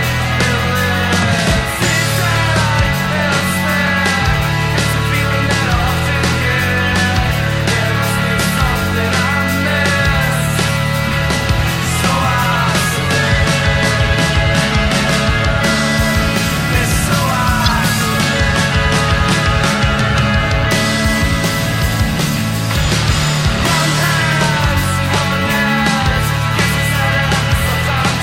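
At 13.35 to 13.37 s and again at 17.65 to 17.71 s, corrupt frame decoded faults produce short, loud bursts heard as a chirp, squeak, blip or noise. Damaged compressed frames were played anyway, scattering energy across wrong frequencies. Unlike a click or dropout, each burst lasts roughly two or three frames.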